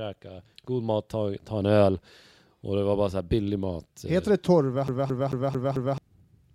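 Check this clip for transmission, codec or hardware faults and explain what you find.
One hardware fault is present. From 4.88 to 5.98 s the speech sticks like a CD stuck on one turn. A scratch throws the laser back a track each revolution. The same 0.22 s slice replays five times, with a brief mute at every jump. It makes a fast, even stutter.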